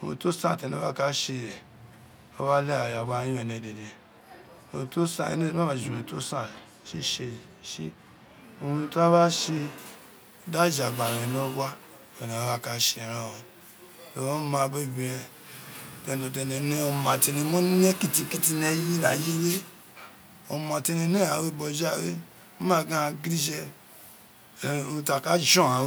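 Speech, with pre-emphasis left on from 9.78 s to the end: a 75 µs FM treble boost without its matching de-emphasis lifts 10 kHz about 14 dB over 1 kHz, so sibilants turn thin and hissy. On a spectrogram, the upper band brightens abruptly from that point.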